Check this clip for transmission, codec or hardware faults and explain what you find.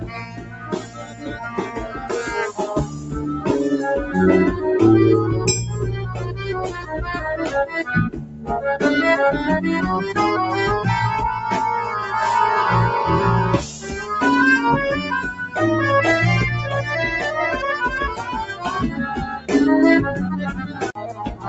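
There is one transmission fault: a speech-tuned noise suppressor is processing the audio, and there are eight moments where it cuts the sound more heavily. The dull top, with nothing above 8 kHz, fits a speech codec such as Opus at a modest bitrate.

Throughout the clip, level pumps and thins by around 10 dB as sustained parts sink. A noise suppressor applied to music or sounds mistakes steady content for noise.

The sound cut by the noise suppressor occurs at 0.0–2.12 s, 2.86–3.14 s, 6.67–6.94 s, 8.1–8.5 s, 13.62–13.94 s, 15.27–15.57 s, 18.17–18.66 s and 20.54 s to the end. At these moments the sound ducks by about 7 to 13 dB and decays are clipped short, because the suppressor pulls these held or fading passages down.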